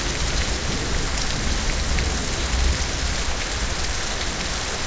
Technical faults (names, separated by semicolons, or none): none